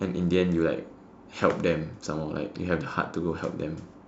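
Nothing in the speech here stands out as a technical fault, so there's nothing to flag anywhere along the way.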